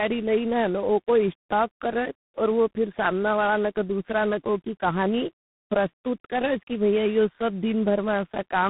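Throughout, the speech suffers tandem speech coding. Each stage re-codes the damage left by the last, which fits three speech coders in a row, ending in G.726, so the speech sounds rough, muffled and warbly. A spectrogram shows nothing above 3.9 kHz and smeared harmonics.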